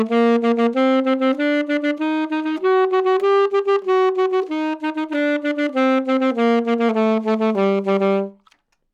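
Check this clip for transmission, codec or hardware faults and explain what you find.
No faults found here.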